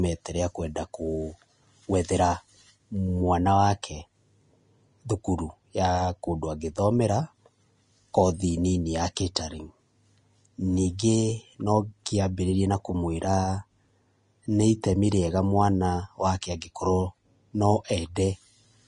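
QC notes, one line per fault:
throughout, Vorbis compression: the speech is hissy and grainy, with nothing above 10.6 kHz and coarsely quantised treble turning fine detail into noise. The damage is plainly audible and points to a low bitrate near 33 kbps. Unlike broadband noise, the hiss follows the spectrum of the speech, which makes a codec the likely cause.
9.35 s, pre-echo: a hiss of about 12 ms comes just before a sharp attack, which sounds softened. The block's quantisation noise, sized for the loud onset, spills into the quiet moment before it. This is not a click or dropout, because the disturbance comes before the attack and not on it.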